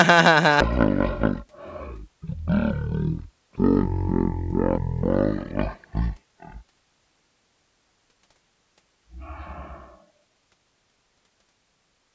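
From 0.60 s to the end, the speech has a wrong sample rate fault: the samples play back far slower than they were captured, with no conversion. Everything runs at about 0.36 times normal speed and drops about 17.6 semitones, which fits 44.1 kHz audio played at 16 kHz. Unlike a pitch shift or a time-stretch, where only one of pitch or timing changes, here both sink together by the same ratio, giving a deep, dragging sound.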